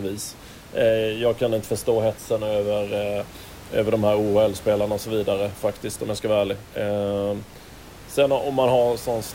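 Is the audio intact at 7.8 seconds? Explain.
Yes, the speech is intact at 7.8 seconds, with only the room's own background noise sitting about 20 dB below it.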